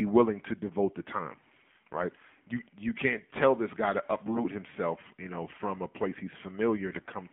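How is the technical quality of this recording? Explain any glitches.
Technical quality is limited: the whole recording carries mobile-codec coloration, and two short bursts of corrupted frames make the speech harsh.

AMR narrowband mobile codec, throughout. The speech was coded with AMR-NB, which models the vocal tract and drives that model with a few pulses per subframe. Here the band runs from about 150 Hz to 3.5 kHz, with nothing above. The buzzy, synthetic tone is plainly audible and points to a low mode around 7.4 kbps.

AMR bit errors, 4.26 to 4.45 s and 6.92 to 7.12 s. Each stretch covers several 20 ms frames, and around 7 percent of their less protected bits were flipped. The frames still decoded because the check on the critical bits passed, but the excitation pulses landed in the wrong places and the finer pitch, gain and spectral values were wrong. Pitch and loudness roughly hold, while the sound turns hoarse, scratchy and gargly.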